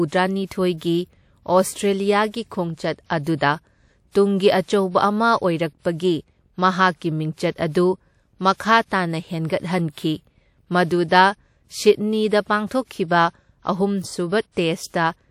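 A short hiss creeps in just before sharp attacks in this speech at 2.28, 3.36, 9.92, 12.68 and 14.52 s, softening each onset. This is pre-echo: codec noise sized for the loud attack spreads back into the quiet moment before it, here over roughly 30 to 60 ms.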